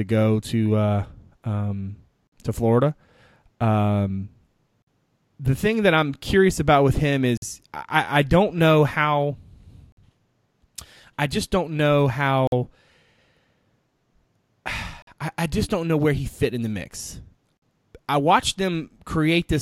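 Gaps between chunks interrupt this speech at 2.27, 4.82, 7.37, 9.92, 12.47, 15.02 and 17.57 s, the first right after "go to uh um". Each is a 50 ms silence repeating every 2.5 s, likely where playback of each new chunk starts slightly late.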